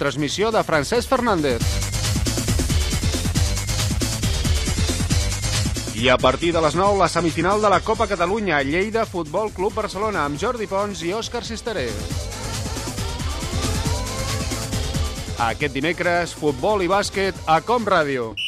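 An adaptive stream at a lower bitrate ran from 4.60 to 8.60 s. The treble above 13 kHz disappears and codec artefacts rise abruptly, with no gap.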